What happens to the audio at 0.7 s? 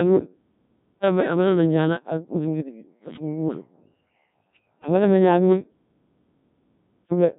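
At 0.7 s you're in a clipped start after a pause. After about 0.38 s of silence the output device has dozed off, and it needs until roughly 1.02 s to wake and lock again. So the first 370 ms or so of the sound that starts at 0.65 s is swallowed, and the speech jumps in abruptly without its opening.

Running underneath that, as through the whole clip, is the Codec 2 vocoder. Only pitch, voicing, energy and a spectral envelope get through, and the decoder rebuilds the voice from sine waves. That gives a heavily robotic, buzzy sound with nothing above 3.8 kHz, at a very low rate around 1.3 kbit/s.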